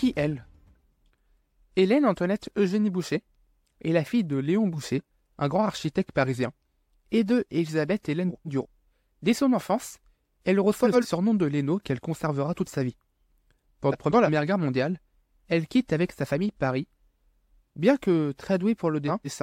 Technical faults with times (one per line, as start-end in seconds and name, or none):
8.29-8.66 frames out of order
10.84-11.05 frames out of order
13.92-14.29 frames out of order
19.07-19.42 frames out of order